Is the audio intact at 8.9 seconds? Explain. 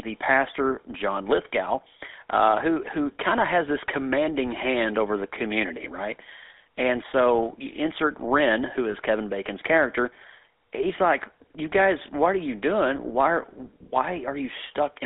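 No. From 8.92 to 8.96 s there are lost GSM frames: a missing frame, consistent with a single 20 ms frame, was filled by repeating the last good frame's settings. It comes out as a brief, rough metallic ring. A plain dropout would leave a gap of silence instead.

Underneath, the GSM full-rate codec runs through the whole clip, including this moment. It resynthesises the sound from a vocal-tract model driven by sparse pulses, which leaves a steady buzzy, gravelly roughness with plainly audible damage. The band is limited to about 300 Hz to 3.6 kHz, and that constant texture is what separates it from the isolated ring.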